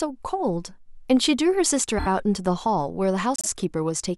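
Repeated frames occur at 1.97 to 2.07 s and again at 3.36 to 3.47 s. The same stretch of compressed data reached the decoder more than once, so it replayed that slice of speech. The first event repeats a 26 ms block three extra times, which fits a single frame, adding 78 ms. The second repeats a 52 ms block, which fits two frames, twice more, adding 105 ms. Each is heard as a brief stutter.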